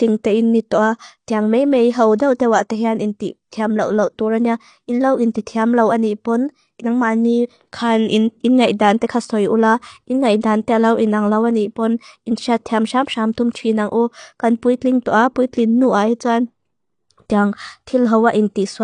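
A speech clip that's been squeezed hard throughout: there's nothing above about 9.8 kHz, so it sounds dull, and the coding damage is plainly audible, with sibilants smeared into a fizzy, warbly texture. That's likely AAC compression, and the cut-off and the artefacts point to low-bitrate AAC-LC, somewhere around 32 kbps, where the encoder drops the top band and thins out the rest to save bits. On top of that there are two bits of pre-echo, a short hiss sneaking in just ahead of a sharp attack: one at 2.18 s, right after "tiang mei mei hau" and before "dau te wa tehan", and another at 5.33 s. Each smear spans roughly 17 to 18 ms. The codec spreads the noise budget meant for the loud onset across its whole block, so it leaks into the quiet gap before the onset and softens the attack.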